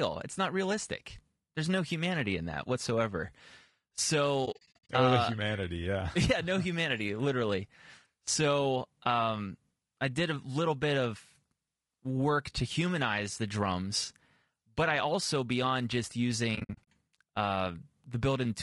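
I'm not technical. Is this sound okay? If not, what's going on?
No. The speech sounds rough and grainy throughout, with a thin, artificial top end. That is likely low-delay AAC compression, the kind video calls use. There is also AAC frame loss with muting: the speech softly drops out in short gaps from 4.45 to 4.90 s, and again from 16.55 to 16.84 s, right after "I also beyond just".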